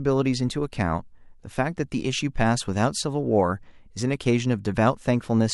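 No technical faults turn up anywhere in the speech. There is nothing here to place on a timeline or trace to a cause.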